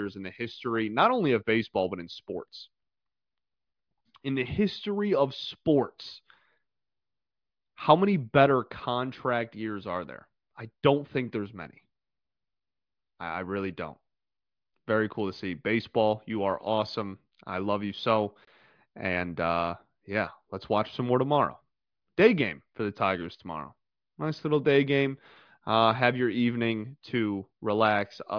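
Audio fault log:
No faults detected anywhere in the speech recording.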